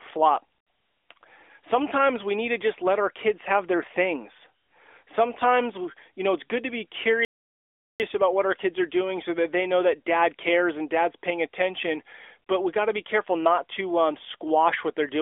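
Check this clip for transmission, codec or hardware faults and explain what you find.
One transmission fault is present: a playback stall in the middle of the speech, heard over a band-limited telephone-type path, roughly 300 Hz to 3.5 kHz, with light coding damage consistent with the AMR narrowband mobile codec.

Playback stall, 7.25 to 8.00 s. After "it's good to be" the audio drops to silence for about 0.75 s, then resumes with "about what our kids". The likely cause is the player running short of buffered data, or its output thread being blocked, so nothing reached the output until it recovered. It is heard as an abrupt gap cutting into running speech rather than a natural pause.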